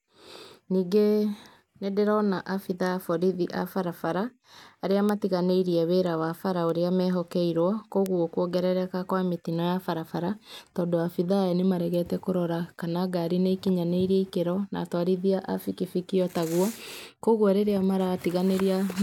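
At 5.09 s a single sharp tick cuts through the speech. It is a bit error spike. One flipped bit throws one sample far off its true value, peaking around -8 dBFS, and the next sample returns to normal. A quieter tick follows at 6.70 s, about -20 dBFS. A third, again near -8 dBFS, lands at 8.06 s, just before "kuongerereka kwa mĩtino". Each is broadband and unrelated to the speech.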